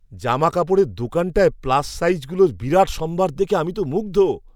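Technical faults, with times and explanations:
No technical faults can be heard in this speech.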